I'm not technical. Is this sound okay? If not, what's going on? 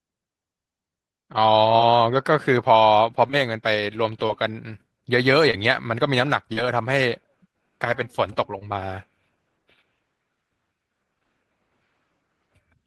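No. This speech has short concealed packet loss. Tiny pieces of the call arrived too late, so the receiver guessed to fill each gap. You hear brief smears or wobbles at 1.77–1.81, 3.27–3.35, 4.27–4.31, 5.51–5.55, 6.53–6.59 and 8.59–8.63 seconds.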